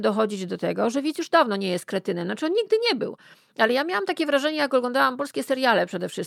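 It's a short speech recording, and the problem is in its timing. That's clock drift between sender and receiver: the sending end's audio clock is running roughly 4 percent fast compared with the receiving end. More audio keeps arriving than the receiver plays out in the same time, so its jitter buffer steadily fills and it has to shed material to keep latency from creeping up. The result is repeated timing corrections from about 0.19 s to 6.05 s, with the receiver trimming out short slivers of audio, always cutting rather than repeating, at uneven intervals. Those corrections work out to a net speed of 104 percent, in line with the drift. Each cut is tiny, so you don't hear obvious gaps, at most slight hiccups or an unsteady tempo.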